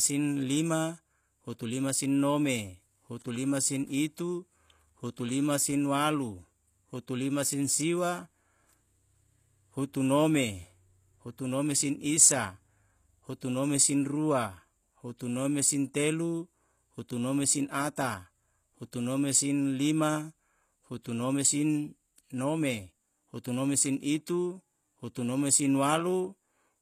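Likely HE-AAC compression at a low bitrate, around 24 kbps, rebuilds the treble by band replication throughout, leaving gritty, lispy s sounds and nothing above 14.9 kHz.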